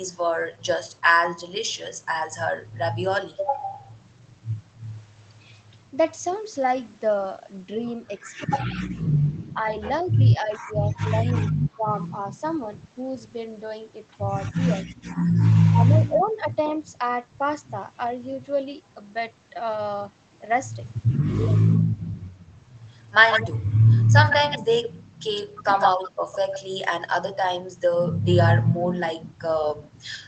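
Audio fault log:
9.53–9.57, 10.43–11.82, 14.54–14.61, 15.71–15.96, 25.55–25.64: speech suppressed in double talk. The voice ducks by roughly 5 to 15 dB in short bursts, likely the echo canceller clamping down while both sides talk.
23.31–23.50, 24.29–26.60: echo leak. A copy of the voice comes back about 154 ms late, first near full level, then a bit quieter, likely uncancelled loudspeaker pickup on the far end.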